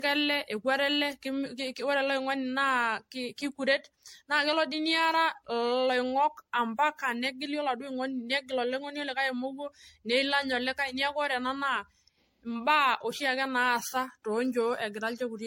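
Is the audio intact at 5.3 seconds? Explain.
No. At 5.3 seconds the speech carries generation loss, present throughout the clip. It sounds swirly, smeared and hollow, with blurred attacks and nothing above 16.7 kHz. The likely cause is repeated MP3 re-encoding, around seven passes, fitting 64 kbit/s.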